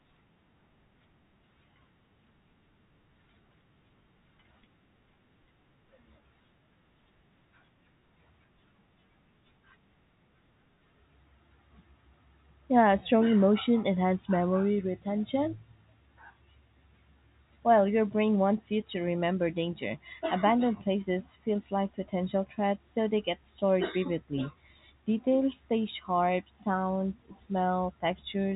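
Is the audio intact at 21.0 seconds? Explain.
Yes, the speech at 21.0 seconds is intact, with no dropout, glitch or other fault at that moment.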